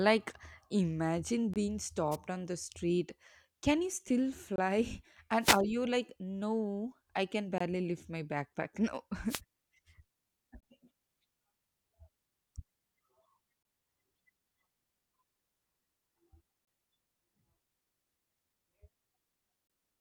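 Audio delivered in 3-second chunks leaves a hard-edged hole of about 23 ms at each join, first at 1.54 s. A wireless microphone noise hit, where the FM radio link fades and receiver noise surges, brings a brief static swish at 2.11–2.16 s, just before "on the street". The chunk gap returns at 4.56 s after "you still". A longer wireless hiss burst at 5.40–5.61 s precedes "you like no I". Further gaps between chunks fall at 7.58 s, another noise hit at 9.28–9.41 s, then gaps at 10.60, 13.63, 16.65 and 19.67 s.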